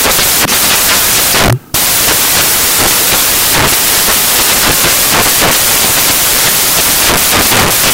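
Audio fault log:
Throughout: samples built from the wrong bytes. The reader assembles each sample from misaligned or misordered bytes, so the rapidly changing low-order bits land in the high-order positions and dominate every value. The result is loud, harsh broadband noise, close to white on loud passages.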